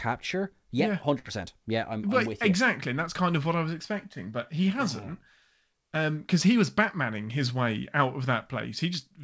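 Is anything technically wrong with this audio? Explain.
Yes. There is a burst of packet loss from 1.19 to 1.25 s in this speech. About 50 ms of audio never arrived in time, so the receiver extended the last sound it had for roughly 52 ms while fading it down, giving a brief held buzz or fading hiss before the speech resumes a little further on, with that stretch missing. Unlike a plain dropout, the gap is filled by stretched sound, not silence. The call path also limits the audio to below 8 kHz, consistent with G.722 at 64 kbps.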